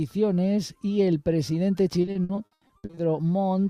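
From about 2.01 to 2.99 s the audio breaks into repeated packet loss, giving a choppy, robotic sound. Twelve gaps land in under a second, the longest around 80 ms. Each one gets patched by stretching the last bit of sound, so nearly half that stretch is filler.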